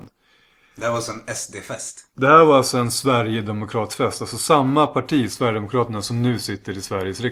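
From the start to about 1.29 s the speech carries a steady 345 Hz buzz that rises and falls with its level: a filter restarted on every block, dropping its state so each block opens with a tiny click, which fits a 128-sample block.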